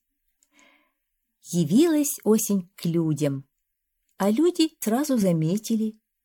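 A brief glitch from 4.79 to 4.83 s is damaged data in the compressed stream, where the decoder loses frame sync; it shows as a short broadband vertical streak and a waveform discontinuity.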